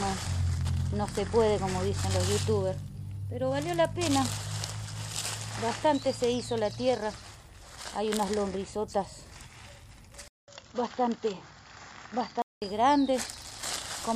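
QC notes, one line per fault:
10.28 to 12.62 s, input switched to a poorer device: after a 200 ms gap the sound comes back dull and boxy, with nothing above 7.3 kHz and a faint new hiss roughly 40 dB under the signal, at much the same loudness, until the full top end returns at 12.62 s. The likely cause is the recording input jumping to a narrower-band microphone or a headset's call profile, whose limited bandwidth and own noise floor stand in for the original device.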